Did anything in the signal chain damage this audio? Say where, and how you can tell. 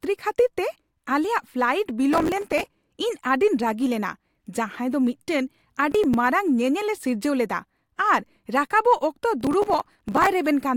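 Yes. A gritty, tearing crackle rides on the speech from 2.12 to 2.75 s, briefly again from 5.92 to 6.14 s, and longest from 9.41 to 10.27 s. This is processor overload crackle at the driver or buffer stage. The processor repeatedly failed to fill its small audio buffers, of roughly 5 ms each, in time. Each miss replayed a hard-edged scrap of old audio, and runs of about 5 to 40 of these in a row fused into the bursts.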